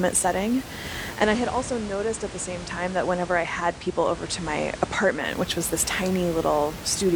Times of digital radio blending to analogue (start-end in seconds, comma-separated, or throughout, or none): 1.09-5.32